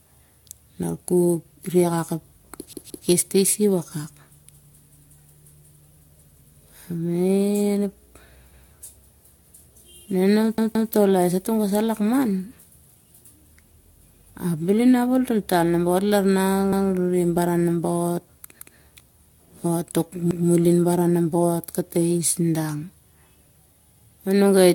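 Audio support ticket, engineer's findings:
Generation loss, whole clip: swirly, smeared, hollow speech with soft consonant attacks and nothing above 17 kHz. This is more damage than a single encode would leave. The likely cause is around five lossy passes, which fits a chain of AAC-LC at 96 kbit/s re-encoded repeatedly. Each pass re-quantises on a shifted frame grid, so the noise and spectral holes stack up. Fix upstream by cutting the transcode chain to one encode.

Repeated buffer, six stutters: 2.73–3.07 s (the same slice heard three times), 8.53, 10.58–10.92 (three times), 16.73, 18.60 and 20.31 s. Each slice is about 171 ms, which fits an 8192-sample buffer. The playback device ran dry and replayed its last buffer, leaving a hard join at each repeat. Nothing seems dropped; the audio just runs late. Check the feeder thread or underrun handling.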